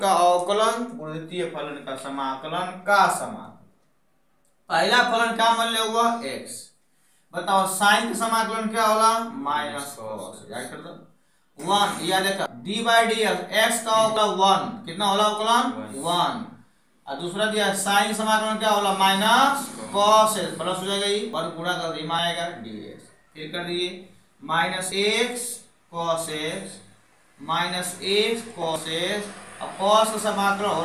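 Six abrupt skips occur at 12.46, 14.17, 21.33, 22.19, 24.92 and 28.76 s, each a jump forward in the audio with no gap, losing roughly 0.1 to 0.3 s. This is likely a dropped buffer (overrun), where unread capture data was overwritten.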